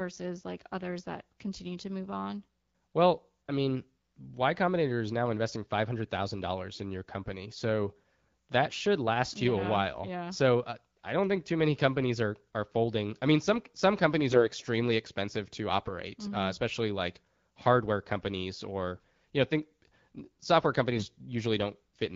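Three short hoarse, gargly patches break into the speech at 8.70–8.76 s, 14.29–14.48 s and 20.92–21.06 s, with pitch and loudness roughly holding while the texture turns scratchy. These are AMR bit errors, heard over the light coding of the AMR wideband (HD Voice) codec at 12.65 kbit/s. On a weak link, a sizeable share of the lightly protected bits in a few frames arrived flipped, misplacing the excitation pulses and skewing the fine pitch, gain and spectral values.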